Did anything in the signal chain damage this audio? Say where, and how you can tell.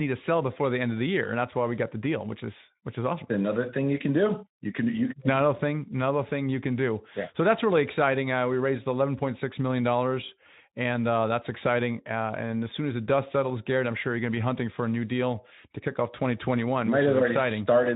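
No, nothing in the signal chain damaged this audio.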